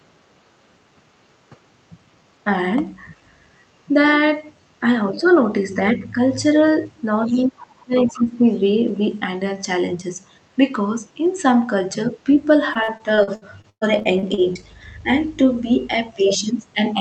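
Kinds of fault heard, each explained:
speech suppressed in double talk: The talker's level sinks while a second voice is active, likely because the echo canceller clamped down during simultaneous talk. There is a slight dip near 6.0 s and a deep one from 7.27 to 8.45 s, about 25 dB down. On a waveform the envelope visibly caves in there, and on a spectrogram the harmonics fade.
other side's voice leaking through: Brief, faint scraps of a different voice appear between 7.27 and 8.61 s, sitting roughly 15 to 40 dB below the main speech. The loudest scrap is around 7.95 to 8.26 s. On a spectrogram these look like weak, separate harmonic traces in and just after the suppressed stretch.
repeated packet loss (robotic sound): From 12.73 to 14.64 s, over a dozen short holes are patched by stretching the preceding sound, and the longest lasts 116 ms. The result is choppy, with pieces missing. A spectrogram shows smeared, frozen harmonic blocks and abrupt breaks, and the waveform shows repeated, regular-looking segments.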